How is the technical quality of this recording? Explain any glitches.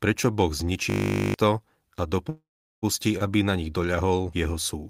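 The recording has two distinct glitches in the speech.

From 0.9 to 1.34 s, a system hang loop repeats one 20 ms slice about 22 times, producing a 50 Hz buzz while roughly 0.4 s of audio is lost.

From 2.29 to 2.84 s, a call audio freeze stretches the last sound into a fading fill, then 400 ms of silence, likely from delayed packets draining the jitter buffer. Nothing is lost, but everything after is delayed by 531 ms.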